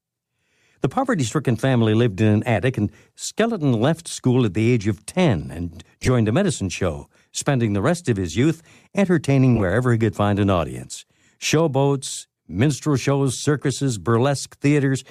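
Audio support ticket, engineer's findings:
Corrupt frame decoded, 6.01–6.08 s before "a medicine show spending" and 9.55–9.63 s between "of his youth entertaining" and "he could find an": loud bursts, error peak around -5 dBFS. The decoder played bit-damaged frames, putting energy at wrong frequencies.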